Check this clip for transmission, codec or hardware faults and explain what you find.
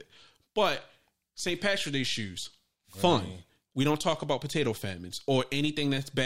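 No faults can be heard anywhere in this speech.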